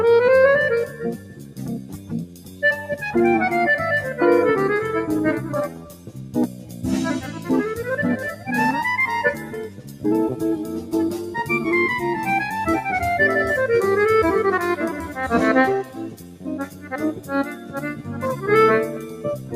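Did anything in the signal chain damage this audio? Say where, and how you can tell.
Yes. A noise suppressor applied to music or sounds was left running in the call-processing stage. Sustained material swings in level by around 10 dB while attacks mostly get through. A waveform shows a pumping envelope, and a spectrogram shows held energy and tails fading unevenly.

Sound cut by the noise suppressor appears at 0.88–2.62 s, 5.68–6.84 s, 9.34–10.05 s, 15.84–18.44 s and 18.87 s to the end. Steady passages drop by about 9 dB (8 dB in the last one) and decays are truncated. On a spectrogram these show as darker bands with abruptly shortened tails.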